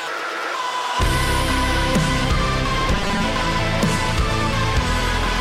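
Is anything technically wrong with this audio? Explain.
Yes. From 2.92 to 3.24 s there is robotic sound from repeated short buffers. A rigid, metallic 200 Hz buzz appears. It likely comes from a 5 ms slice looping while most of the real audio is skipped.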